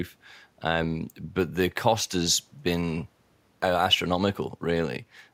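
The speech signal shows no technical faults, and the only other sound is the room's own background noise, sitting about 41 dB below the speech.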